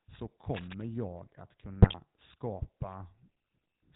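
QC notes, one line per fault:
Throughout: GSM full-rate codec. The speech has a buzzy, gravelly roughness and nothing above 4 kHz, which fits the 13 kbps full-rate coder. It rebuilds the vocal tract from a filter driven by regularly spaced pulses and keeps only every third excitation sample, so the damage is plainly audible.
1.82 to 1.98 s: GSM bit errors. For about 160 ms the speech breaks into squawks and gargling, with sudden jumps in level. Corrupted filter, pitch and gain values reached the decoder and bent the spectrum frame by frame. The sound points to roughly six damaged frames at a bit error rate near 3 percent.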